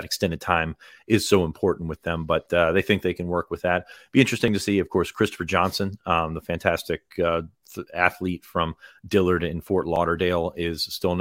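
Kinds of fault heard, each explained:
Dropped buffer (overrun): three brief skips at 2.46, 4.48 and 9.96 s, each with a slight jump forward in the speech and no silent gap. The likely cause is samples being overwritten before they were read, so a few milliseconds vanish and the two edges join directly.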